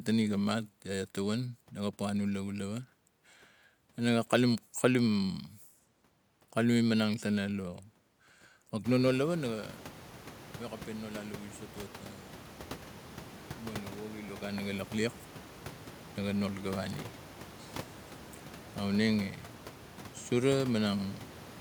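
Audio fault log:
No faults are heard in the speech. The room noise rises by about 22 dB at roughly 9 s and stays about 19 dB below the speech, while the smooth level changes move up and down like a fader.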